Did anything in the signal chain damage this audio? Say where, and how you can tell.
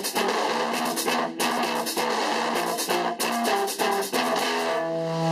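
No, nothing audible points to damage at any stage of the chain.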